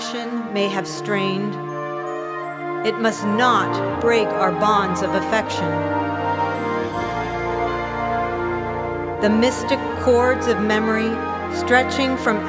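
No technical faults can be heard anywhere in the recording. The audio runs without any dropout, glitch or distortion.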